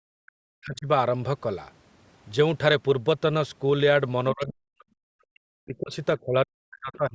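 A speech recording with speech suppressed in double talk at 0.0–0.88, 4.33–4.86, 5.3–5.93 and 6.21 s to the end. The talker drops sharply, by roughly 40 dB, likely because the echo canceller turned both sides down. The other side's voice leaking through appears at 6.93–6.97 s. It is a faint scrap, about 30 dB below the talker, likely echo the canceller missed.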